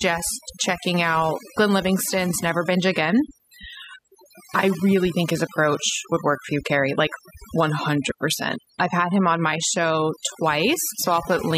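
Throughout the clip, a noise reduction stage was pushed too hard, cutting individual frequency bands deeply whenever they sat close to its noise estimate. That is overdone noise removal: the background falls away into twinkling, warbling specks, and quieter parts of the speech are pulled down along with it.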